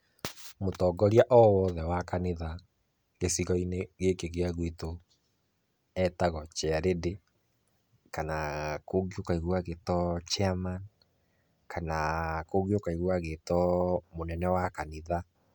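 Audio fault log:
No fault is heard in this audio.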